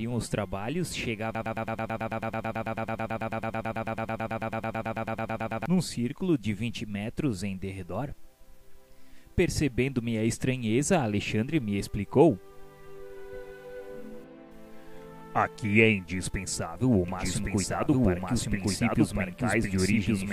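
A stall in the player, encoder or stream likely left it resending its last buffered fragment, producing a broken-record loop from 1.35 to 5.66 s: a piece of about 110 ms repeats exactly, back to back, 39 times, and the audio that belonged there is lost. From 17.08 s to the end, a doubled audio track, likely from a second, slower capture path or an edit holding two copies out of step, adds a full-band copy about a second behind, at roughly the same level, with no decay or room colour, starting abruptly.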